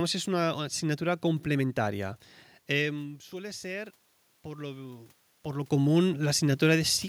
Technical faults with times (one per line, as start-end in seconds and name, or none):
2.95-5.18 automatic gain rising